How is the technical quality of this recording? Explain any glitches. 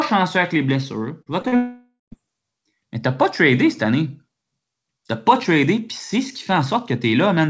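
The recording has a cluster of packet-loss faults in under a second of speech, all within a call-codec signal that stops at 8 kHz, which fits a wideband codec such as G.722.

Short concealed packet loss occurs at 1.22–1.28 s, 1.42–1.46 s and 1.48–1.54 s, with gaps of about 40, 20 and 40 ms. The decoder bridged each hole by extending the preceding sound, so it comes across as a brief smear or wobble. On a spectrogram these show as short, blurred, overly smooth patches.

A long network dropout follows from 1.56 to 2.14 s, likely caused by roughly half a second of audio never arriving. The concealment first stretches the last sound into a fading buzz, then leaves about 130 ms of near silence before speech resumes with that section missing. A spectrogram shows a decaying smear into a blank band, and the waveform flattens.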